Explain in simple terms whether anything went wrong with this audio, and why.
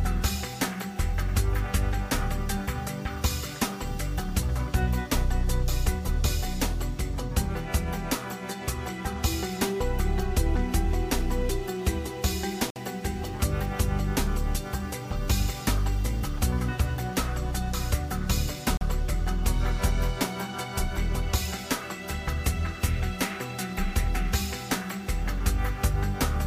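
A gap between stream segments shows up twice, at 12.70 s (about 55 ms) and 18.77 s (about 39 ms). The audio arrives in 6-second pieces, and two pieces' timings didn't line up, so the player filled the space with brief silence.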